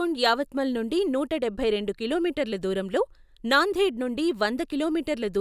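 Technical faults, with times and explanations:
Nothing in this recording stood out as a technical problem on listening.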